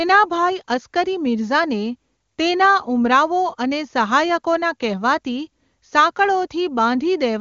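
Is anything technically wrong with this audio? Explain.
No, nothing stood out as a technical fault when listening to this speech recording.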